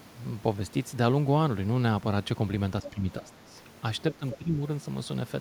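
At 2.82 s, a brief scrap of the other side's voice leaks through, about 15 dB under the talker. It is likely residual loudspeaker echo. From 2.82 to 3.56 s, speech is suppressed in double talk. The talker dips by around 10 dB, likely because the canceller ducked both voices together. From 4.18 to 4.61 s it happens again, deeper, around 15 dB. Another leaked fragment of the far side sits at 4.31 to 4.37 s, also about 15 dB down.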